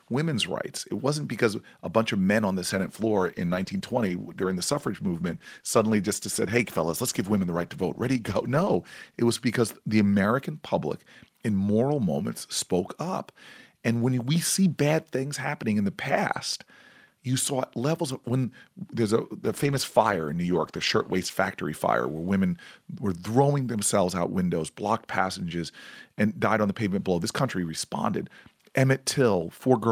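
Speech with two call bitrate drops, at 2.71–9.99 s and 19.43–21.43 s. The codec coarsens and the spectrogram's upper band is cut off, consistent with 64 kbps falling to about 19 and 18 kbps.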